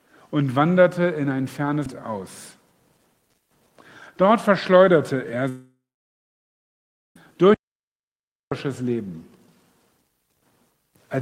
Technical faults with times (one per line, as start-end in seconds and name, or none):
1.86 CD skip
5.49-7.16 long network dropout
7.54-8.51 audio dropout to silence